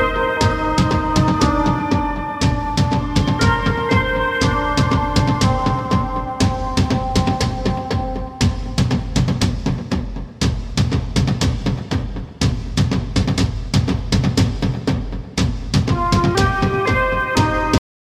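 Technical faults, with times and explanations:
17.78 s, cut-off end: The sound stops abruptly in the middle of an event and falls straight to digital silence. There is no decay and no fade. The final buffers of audio were never written or played out, so the signal ends wherever the data ran out. The last 0.36 s, up to the end of the file, is flat silence. A natural ending would tail away. This one is simply severed.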